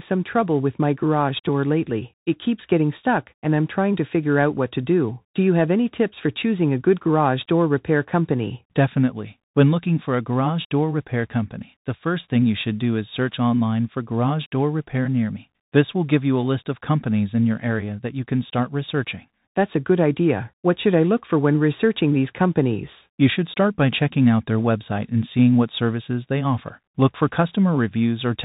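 Bluetooth CVSD headset codec damage runs throughout this speech clip, which fits a 64 kbps CVSD stream. Each sample carries only one up-or-down bit with an adapting step, so nothing above 4 kHz survives, loud high sounds overload into distortion, s sounds turn scratchy, and granular hiss sits underneath.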